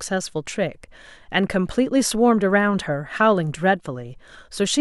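No technical faults can be heard anywhere in the recording of speech, with the signal holding steady and intact throughout.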